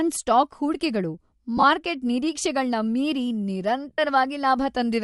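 Throughout the speech, a low-bitrate transform codec, likely Bluetooth LC3 compression, has zeroed much of the upper spectrum and filled it with noise. Consonants and vowels take on a breathy, grainy edge, plainly audible here and consistent with a 48 kbps stream in 7.5 ms frames.

Lost LE Audio frames then interrupt the signal twice. Just after "ಸ್ಟಾಕ್ ಹೂಡ್ಕೆಗಳು", from 1.57 to 1.64 s, 37.5 ms of audio goes missing in gaps scattered over 60 ms, the longest about 20 ms, which fits five lost frames. The decoder refills each gap by reusing the last spectrum with randomised signs, so the speech briefly turns into a noisy smear. From 3.93 to 3.98 s a longer 52.5 ms loss, pointing to seven frames, smears the same way and begins to fade as the concealment runs on.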